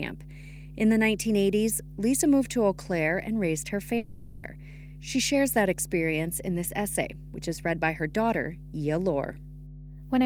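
A speech recording with a steady 50 Hz mains hum running under it from start to finish. The hum is strong, roughly 10 dB below the speech. It points to a ground loop or a nearby transformer leaking power-line current into the signal. After "and raised her", from 3.97 to 4.45 s, the speech breaks off. A fading buzz fills the whole gap, with no true silence. Speech then resumes with about half a second lost. This is likely a long network dropout, with the receiver stretching the last sound until audio arrived again.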